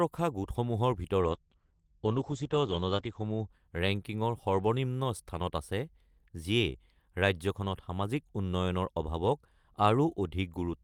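A call bitrate drop hits this speech recording from 1.23 s to 4.15 s. The connection's bandwidth estimate fell, so the encoder was told to spend far fewer bits, which sounds like a fall from about 32 kbps to about 12 kbps. The coarser coding makes the speech rough and watery, and the audio band narrows from 20 kHz to 8 kHz, muffling it. It stays at its worst for 1.85 s before the bitrate recovers.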